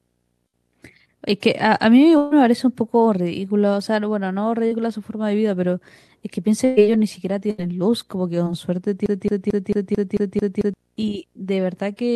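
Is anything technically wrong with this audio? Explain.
Yes. There are several faults.

Throughout the clip there is video or display buzz. A screen or video cable is coupling into the audio path, adding a buzz at the 59.94 Hz field rate with hash above it and a thin 15.7 kHz line-rate whine. It sits about 45 dB below the speech.

There are four bursts of packet loss, at 0.47–0.55 s, 2.17–2.33 s, 6.65–6.79 s and 7.51–7.60 s. Runs of packets arrived too late or not at all, losing about 60, 140, 120 and 80 ms. The receiver extends the last sound and fades it, so each gap becomes a held buzz or fading hiss before speech resumes further on.

Short concealed packet loss occurs at 4.67–4.73 s and 8.44–8.48 s, losing about 40 ms and 20 ms. The decoder patches each hole by continuing the preceding sound and then blending back in. This leaves a brief smear or wobble where a short sound can drop out.

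From 9.06 to 10.74 s there is a broken-record loop. A 222 ms fragment repeats exactly, back to back, eight times. The likely cause is a stalled player, encoder or stream resending its last buffered piece. The speech that belonged in that span is lost.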